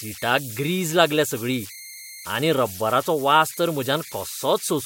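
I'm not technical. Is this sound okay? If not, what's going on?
No. There's a high whistle, around 2 kHz, throughout the speech, with a grainy hiss under quiet moments. These are converter idle tones. The recording chip got stuck repeating tiny patterns when the sound was soft, and those patterns became an audible tone.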